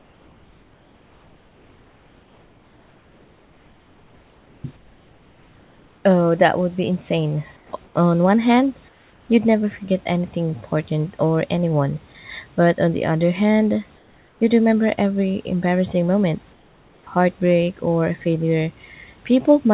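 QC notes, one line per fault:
0.00–4.64, 4.77–6.05, 7.57–7.73, 7.85–7.95, 8.89–9.29, 13.97–14.41 and 16.53–17.07 s, comfort noise in place of the background: likely discontinuous transmission during pauses, so the room background becomes steady, featureless hiss about 2 to 4 dB quieter.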